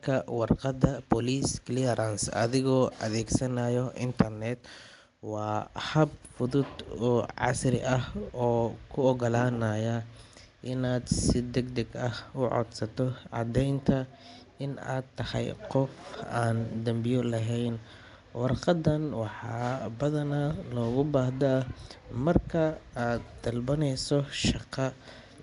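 Likely Nellymoser compression throughout: coarse fixed-bit block coding starves weak bands and fills them with noise, giving the speech a rough, hissy, underwater smear, with nothing above 10.6 kHz.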